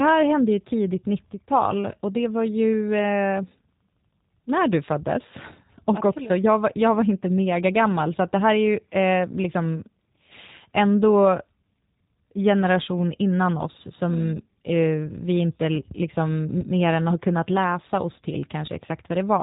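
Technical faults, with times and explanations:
throughout, G.729 codec: the speech has been squeezed through the G.729 voice codec, which discards the actual waveform and rebuilds each 10 ms frame from a vocal tract filter, a pitch predictor and a few fixed pulses. Nothing above about 3.8 kHz survives, so sibilants lose their edge and the sound is boxy and narrow. The damage is plainly audible as a rough, faintly synthetic texture, which fits a low bitrate around 8 kbit/s.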